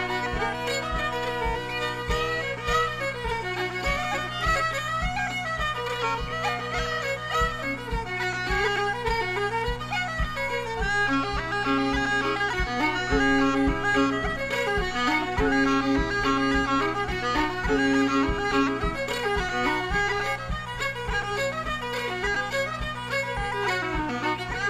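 No technical faults can be heard anywhere in the audio: the signal stays continuous throughout.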